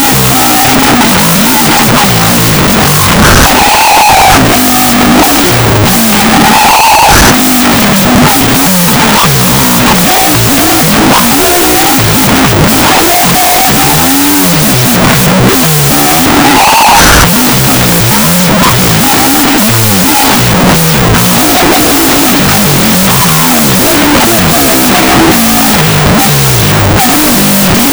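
Throughout, a wrong sample width fault: what sounds like 16-bit data read as unsigned 8-bit bytes buries the sound in loud noise and plays it at half speed, an octave low.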